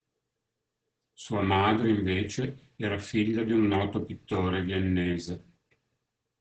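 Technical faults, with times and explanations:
Throughout, Opus voice compression: the speech sounds muffled, hoarse and slightly robotic, with nothing above 8 kHz. Coarse SILK excitation coding fits a rate near 10 kbps.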